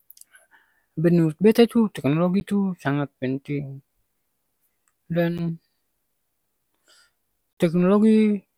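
At 2.40 s and 5.38 s the speech drops into a block of digital silence about 10.7 ms long. Each gap fits a 512-sample buffer left unfilled. Each is heard as a tick. At 7.53 to 7.57 s a 42.7 ms gap opens a short, audible hole.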